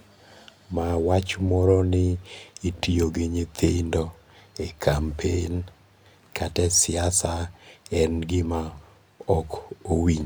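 No technical faults detected anywhere in this speech recording.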